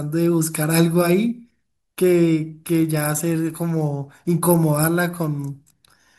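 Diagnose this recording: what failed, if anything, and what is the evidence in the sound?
Nothing failed; no fault can be heard anywhere.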